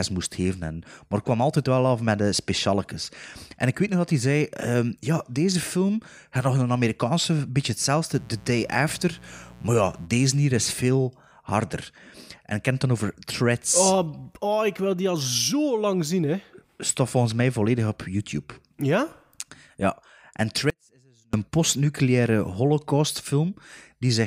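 A speech recording with two technical faults. From 8.10 to 10.09 s, right after "een beetje" and before "deze hier is veel", a mains buzz sits about 25 dB below the speech. It is a raspy 60 Hz drone made of sharp switching spikes, and on a spectrogram it shows as an evenly spaced stack of horizontal lines at 60 Hz multiples reaching several kHz. From 20.70 to 21.33 s there is an audio dropout to a faint residue. For 0.63 s the speech cuts abruptly to a trace roughly 40 dB down, likely because the feed broke upstream while later stages stayed live. The waveform collapses to a thin, near-flat band with hard edges, not a taper.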